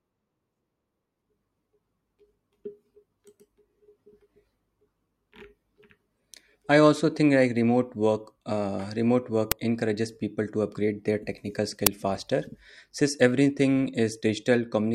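Speech with two uninitialised buffer cracks, at 9.52 s after "remote work uh remote" and 11.87 s after "to upgrade their technical". In each, a 5 ms block of leftover memory plays as a loud crack, seen as a tall waveform spike and a full-band spectrogram stripe.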